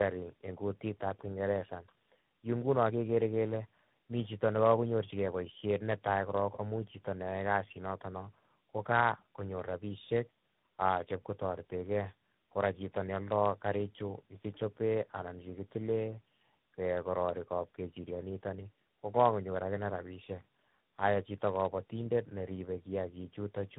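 From the start and through the whole clip, the speech carries tandem speech coding. It sounds rough, muffled and warbly, worse than one codec alone would leave it. The character fits three low-rate speech codecs in a row, such as GSM full rate, AMR-NB and G.726. Each re-encoded the damaged output of the one before. So the errors stacked at every link.

At 18.46 s, just before "ni kokakonyor", there is a single sharp click. It is a brief jump in the waveform, with no sound missing. The likely cause is dropped samples, perhaps only a couple, far under a millisecond. The signal leaps straight to a later value. That step shows as a thin vertical line across the spectrum.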